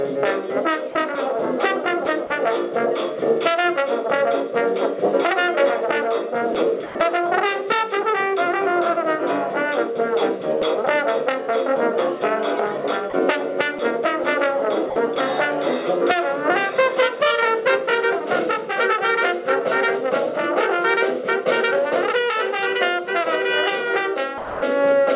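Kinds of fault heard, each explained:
Sound dropped by the voice detector: The sound briefly gives way to steady, featureless noise and then returns. It happens six times, at 0.92, 2.27, 6.86, 13.1, 14.9 and 24.38 s. The gaps last 30, 30, 90, 30, 60 and 240 ms. The likely cause is the sender's voice detector judging the sound to be background and pausing transmission, with comfort noise filling in. The fill sits within the call's 4 kHz bandwidth.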